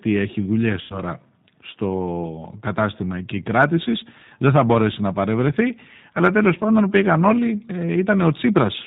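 Throughout, the speech carries G.729 codec damage, and it is plainly audible. Nothing above 4 kHz survives. Each 10 ms frame is rebuilt from a vocal tract filter, a pitch predictor and a few pulses. The result sounds rough and faintly synthetic, which fits an 8 kbit/s G.729A stream.

From 0.81 to 0.98 s, just after "έχει δουλειέ", VoIP packet loss is concealed by the speech codec. About 90 ms of audio went missing, which points to three lost packets. The decoder stretched its last pitch and filter into a fading buzzy tone or coloured noise. Because each frame builds on the previous one, the sound stays weak briefly after it resumes.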